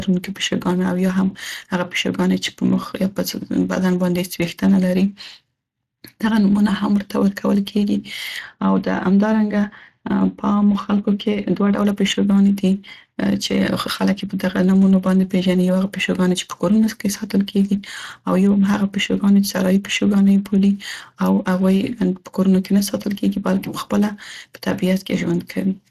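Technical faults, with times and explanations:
Throughout, Speex codec: the speech sounds noisy and hoarse, with plainly audible coding damage and nothing above about 15.5 kHz. This low-bitrate CELP coding, around 22 kbps, leaves too few bits for the excitation, and the upper band is only a shaped, noise-like fill.
8.39–11.79 s, de-emphasis applied wrongly: the speech turns dull and muffled, its top end sloping smoothly away to about 13 dB down at 10 kHz relative to 1 kHz. A treble cut meant to undo pre-emphasis was applied where none existed, or applied twice.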